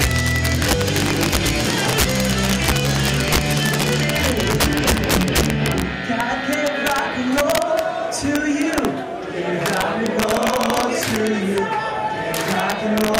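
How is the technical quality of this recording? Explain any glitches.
Technical quality is compromised by integer overflow throughout. Peaks driven about 5 dB past full scale wrap to the opposite sign instead of limiting, producing harsh cracks on under one percent of samples.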